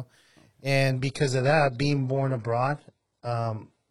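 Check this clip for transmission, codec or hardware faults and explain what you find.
One transmission fault is audible. An adaptive stream at a lower bitrate takes over from 0.9 s to the end: the slowed connection forces a cheaper encoding, which fits a switch from 96 kbit/s AAC to 12 kbit/s HE-AAC. The speech abruptly turns thinner, with nothing above 11.1 kHz, and there is no gap.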